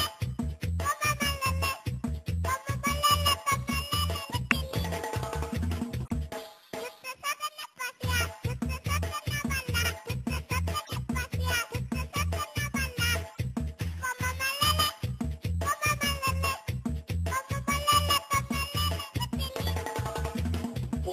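Corrupt frames are decoded at 4.51 s, 5.97 to 6.11 s, 9.80 to 9.86 s, 10.84 to 10.92 s and 13.32 to 13.38 s. Damaged frame data plays back anyway, misplacing energy into brief chirps or noise bursts. The first is loudest. The second spans several frames and adds 20.3 ms.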